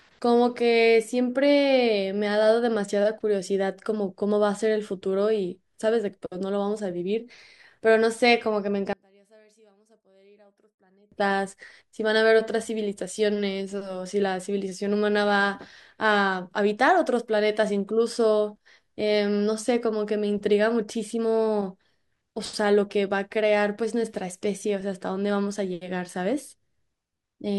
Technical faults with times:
8.93-11.12 one channel inverted

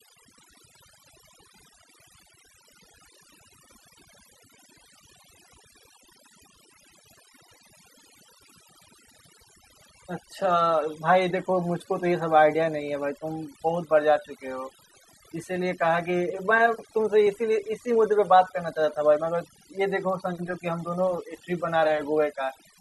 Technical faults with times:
0.00-22.81 overdone noise removal

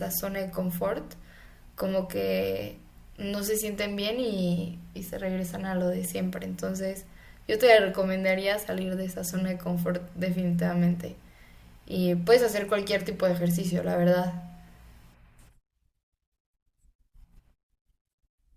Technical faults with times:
none

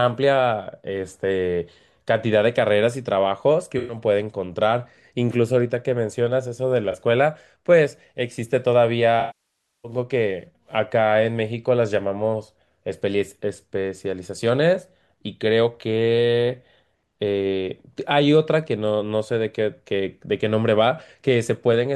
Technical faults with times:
3.78-3.98 AAC frame loss with concealment
6.92-6.95 AAC frame loss with concealment
9.20-9.92 AAC frame loss with concealment

